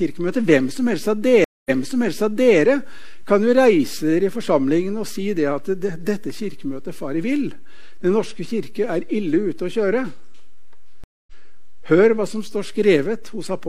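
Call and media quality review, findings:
Stream reconnect at 1.44–2.59 s (0.21 s silence, resumes 0.93 s earlier, repeating audio) and 11.04–11.33 s (0.24 s silence, skips roughly 0.15 s ahead). Player rejoined with a fresh decoder; unlike a dropout, the timeline jumps.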